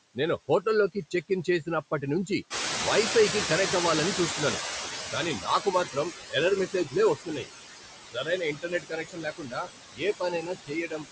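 A speech recording in which the background noise sinks between phrases and swells under them: these are noise suppressor artifacts, from a suppressor that pulls noise-dominated bands down by about 18 dB frame by frame. Around 2.5 s the room noise jumps by about 15 dB, and it comes through with less reduction at first before fading over roughly 3.5 s. That is the noise suppressor catching up: its noise estimate lags the rise until it settles at a cut of about 14 dB by 6.0 s. Parts of the speech sound swallowed or faint at 0.94–1.48, 5.39–5.66, 5.85–6.13, 6.67–6.96, 7.16–7.48, 8.06–9.69 and 9.92–11.06 s. This is speech cut by the noise suppressor, which mistook soft sounds for noise and dropped them by about 11 to 21 dB, with the longest losses near the end.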